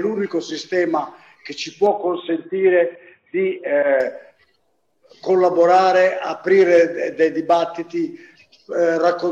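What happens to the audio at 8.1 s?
Nothing goes wrong at 8.1 s; the audio plays through that moment intact, with no dropout, click or distortion.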